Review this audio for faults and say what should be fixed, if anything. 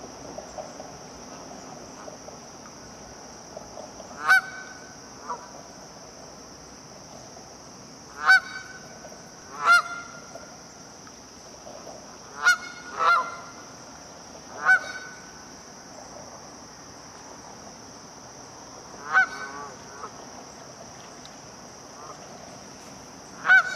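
Small jumps forward in the sound occur at 2.94, 9.42, 11.14 and 15.84 s. The first three skip about 20 ms each, and the last about 40 ms. These are likely dropped buffers (overrun): samples were overwritten before being read, and the remaining audio was butted together. A larger capture buffer and higher priority for the recording thread should prevent this.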